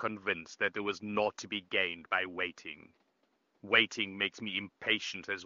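No technical faults can be heard in this speech recording. A faint room noise sits about 42 dB below the speech, and the AMR wideband (HD Voice) coding sounds clear, which fits one of its highest rates.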